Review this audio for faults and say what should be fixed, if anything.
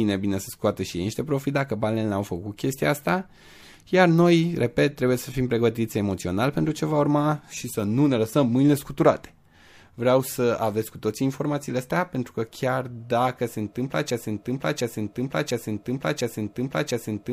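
From 14.10 s to the end there's a broken-record loop: a 0.70 s fragment repeats exactly five times, likely a stalled player or stream resending its last buffer. Buffer-underrun handling that outputs silence instead of replaying the last chunk would prevent it.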